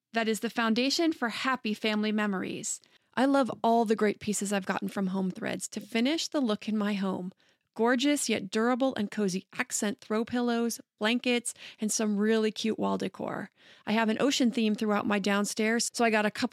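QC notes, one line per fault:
No fault found in this clip.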